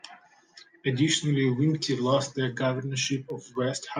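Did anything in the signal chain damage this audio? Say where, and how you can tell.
Yes: periodic USB or driver dropouts at the driver/buffer stage. Brief ticks every 0.25 s from 3.05 to 3.8 s mark where a fraction of a millisecond of speech is replaced by silence.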